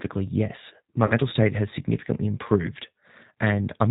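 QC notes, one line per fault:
Throughout: G.729 codec. The speech has the slightly rough, synthetic quality of a low-rate VoIP codec. The sound points to 8 kbit/s G.729A coding, and the damage is plainly audible. The decoder rebuilds each 10 ms frame from a vocal tract filter, a pitch predictor and a few pulses, so fine detail in the waveform is lost. Nothing above 4 kHz comes through, which leaves the sound dull and band-limited.
1.06–1.13 s: VoIP packet loss concealed by the speech codec. About 40 ms of audio goes missing, which fits two lost packets. The decoder fills the gap by repeating its last pitch and filter settings. It lowers the gain frame by frame, so the sound stretches into a short buzzy tone or coloured noise that fades. Each frame depends on the one before, so the speech stays weak or distorted for a little while after the gap.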